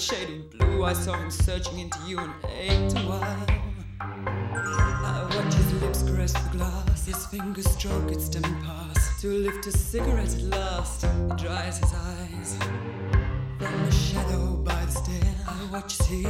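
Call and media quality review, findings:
Nothing stood out on listening to this recording, and there are no findings to log against it.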